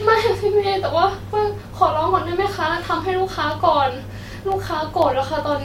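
A speech clip with periodic USB or driver dropouts from about 3.02 s to 5.52 s: roughly seven brief gaps, one every 0.5 s, each a tiny fraction of a millisecond filled with silence. They come from something stalling the USB bus or audio driver on a fixed schedule, and they sound like regular ticks during speech. A spectrogram shows evenly spaced thin vertical broadband lines. The waveform shows matching hairline notches.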